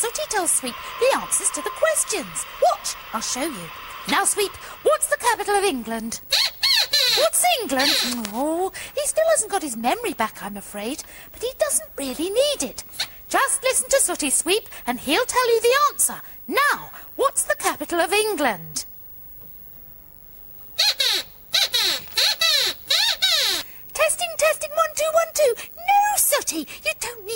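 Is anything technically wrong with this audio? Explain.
Yes. At 8.25 s a bit error spike appears: flipped bits push a few consecutive samples to about -2 dBFS and straight back, producing one sharp broadband tick unrelated to the audio.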